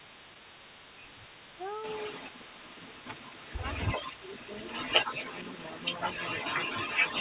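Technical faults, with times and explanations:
Throughout, echo leak. A delayed copy of the sound trails the speech by 269 ms, heard within the narrowband 4 kHz call audio. The copy is strong, at times louder than the direct speech. The likely cause is a loudspeaker on the far end whose echo canceller let its microphone pickup return.
4.03 to 4.27 s, speech suppressed in double talk. The speech dips by a modest amount for a total of around 150 ms. Both sides seem to overlap here. The echo canceller likely turned everything down, unable to separate talker from echo.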